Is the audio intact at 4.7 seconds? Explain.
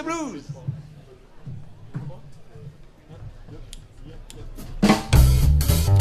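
Yes, the audio is intact at 4.7 seconds, with nothing there to break the continuity of the sound.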